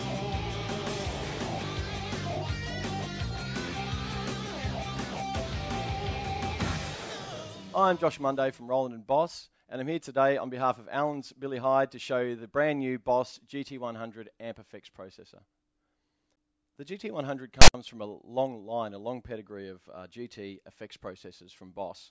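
At 17.62 s a harsh, hard-edged rasp bursts in, then drops to dead silence before the sound resumes at 17.74 s. This is file tags played as audio: a block of text metadata and its zero padding decoded as samples.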